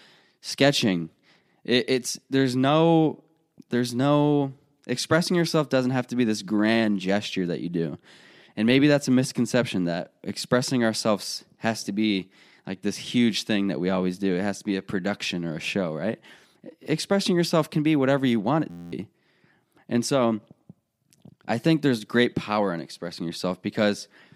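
Speech runs normally until a system hang loop from 18.70 to 18.92 s. A frozen driver left the hardware replaying one 11.61 ms slice of its ring buffer, which fits a 512-sample buffer, so the voice turns into a steady buzz at 86.1 Hz. About a fifth of a second of speech is lost. Unlike a dropout, which goes silent, or network jitter, which repeats irregularly, this repetition is exact and periodic, which gives it a fixed pitch.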